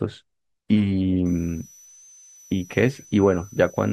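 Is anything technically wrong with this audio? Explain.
Yes. There is a switching supply whistle from 1.26 s to the end of the clip. A switching power supply in the recording chain is falling into an audible burst mode or beating against another supply, and its stray noise leaks into the audio. The result is a thin, high whistle, wandering between about 5.9 and 6.2 kHz and sitting roughly 30 dB below the speech.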